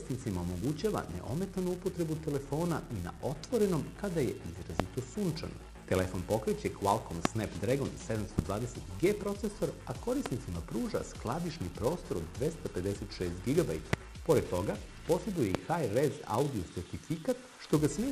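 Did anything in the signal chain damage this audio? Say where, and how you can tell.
Yes. Throughout, a filter restarted on every block in the buffer stage leaves a 345 Hz buzz tracking the level, which fits a 128-sample buffer.

Loud pops at 4.80, 7.25, 8.39, 10.26, 13.93 and 15.55 s, each about 15 to 25 dB above the sound, are likely analogue switching or static transients.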